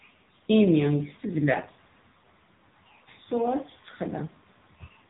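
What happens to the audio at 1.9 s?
At 1.9 s the speech is passing through an AMR narrowband mobile codec, as it does for the whole clip. Nothing above about 3.8 kHz survives. The codec rebuilds the voice from a vocal-tract model driven by sparse pulses. The heavy buzzy, synthetic tone points to a low rate near 6.7 kbps.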